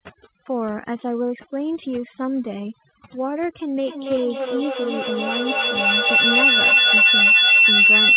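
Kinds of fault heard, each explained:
Overdone noise removal: A noise reducer set far too aggressively is cutting individual frequency bands whenever they sit near its noise estimate, taking quiet parts of the speech along with them. Throughout, the background drops and breaks up into twinkling specks.
Feedback howl: From 3.79 s to the end, two devices in the same room on one call form a loop that gains level on each pass, so the repeats grow rather than fade. A tone around 3 kHz builds, with the loop repeating roughly every third of a second, and peaks about 10 dB above the speech.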